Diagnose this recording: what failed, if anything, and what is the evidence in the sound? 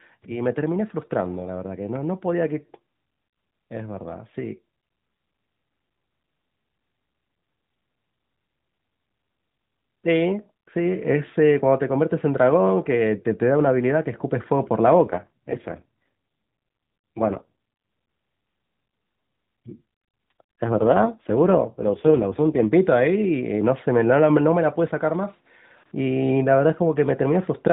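AMR rate drop, from 15.04 to 17.50 s and again from 20.64 to 22.68 s, is a codec-stage fault. In both stretches the speech turns rougher and more synthetic, keeping the same narrowband limit of the AMR-NB mobile codec, with no gap. That points to the network ordering the encoder down to a lower mode to spend bits on error protection, which fits a drop from 12.2 to 4.75 kbps, before it returns to the full rate.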